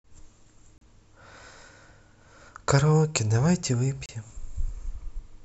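Speech with two roughly 30 ms dropouts to silence, at 0.78–0.81 s and 4.06–4.09 s, seen as thin blank vertical gaps, likely a Bluetooth stall from delayed packets.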